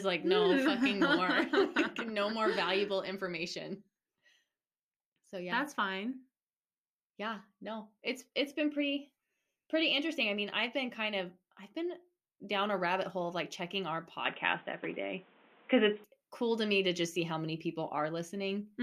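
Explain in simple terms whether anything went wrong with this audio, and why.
Around 14.25 s, just after "of like checking our", the speech suddenly turns dull and boxy, with nothing above 3.8 kHz, a change in loudness and faint new background noise. At 16.04 s, before "cool to me to", it clears again. This is likely an input switched to a poorer device.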